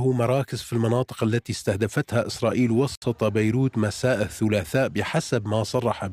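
The audio has a gap at a join of encoded pieces: at 2.95 s the sound drops out to silence for about 67 ms, resuming at 3.02 s exactly where it left off. The edges are smeared by the codec. This points to separately encoded segments being concatenated without trimming, so the encoder's start-up delay and the padded final frame of the preceding segment remain as dead air in the middle of continuous sound.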